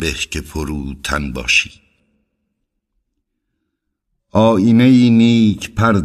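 From 0.0 to 2.0 s the speech sounds thin, bright and hissy, with sibilants spitting forward. This is pre-emphasis left on: the treble lift applied was never undone, leaving 10 kHz about 11 dB above 1 kHz, a shape consistent with a J.17 curve.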